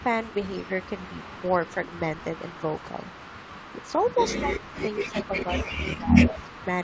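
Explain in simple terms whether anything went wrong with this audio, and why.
Two things went wrong, and both point to a speakerphone on the other end of the call.

The first is an echo leak. The far side was likely playing the call through a loudspeaker, and its echo canceller didn't fully remove what its microphone picked up, so some of the sound was sent back. You hear a second copy trailing about 153 ms behind: briefly at 0.0 s, then through 0.24 to 4.21 s, and again at 4.57 to 5.29 s, 5.71 to 6.01 s and 6.27 to 6.67 s, where the echo is at its loudest.

The second is speech suppressed in double talk. When both sides spoke at once, the echo canceller couldn't tell the real talker from the returning echo and turned everything down. The speech suddenly dips, sounding muffled or partly cut away, at 4.37 to 4.74 s, over a longer stretch from 5.03 to 6.15 s, and briefly at 6.34 to 6.51 s. 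The first of these dips is the deepest.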